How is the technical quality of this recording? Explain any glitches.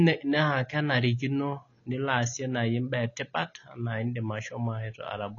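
The recording has clearly audible codec damage that runs the whole way through, so the quality is noticeably compromised. The speech sounds dull and a bit smeared, with nothing at all above about 7.1 kHz, and sibilants come across fizzy and watery. That points to AAC compression, likely low-bitrate AAC-LC somewhere around 24 kbps. At that rate the encoder drops the top of the spectrum and quantises the remaining bands so coarsely that gaps and a warbly texture appear.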